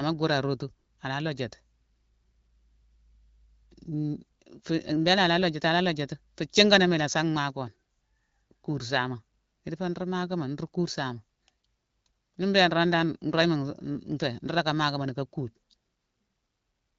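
The speech arrives intact through an AMR wideband (HD Voice) link at 12.65 kbit/s, a rate at which this codec's light coding damage leaves the speech clear, and no technical fault can be heard anywhere in the recording.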